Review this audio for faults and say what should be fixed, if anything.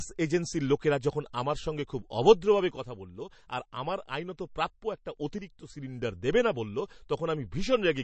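The speech sounds watery and swirly throughout. Sibilants carry metallic chirps, and consonant attacks smear. Nothing is heard above about 8.3 kHz, a hard treble ceiling. This is likely MP3 compression at a starved bitrate, roughly the 36 kbps range. The encoder cut the top band and zeroed weak frequency lines, which flicker frame to frame. The damage is plainly audible. Encode at a higher bitrate, or keep a lossless master.

The level drops abruptly by about 6 dB from 2.77 to 5.17 s, and again from 5.38 to 5.70 s. It recovers sharply each time. This is likely one channel dropping out before the mono sum. Material common to both sides halves, and anything only on the lost side vanishes. The drops are repeated. Secure the stereo path and monitor both channels during capture.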